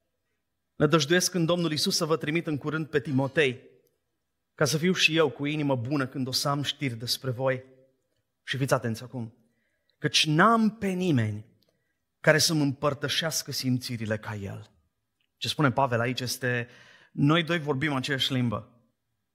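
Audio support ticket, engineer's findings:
Speech signal checked with no technical faults found and no transport, device or processing issue identified, so no component fix is required.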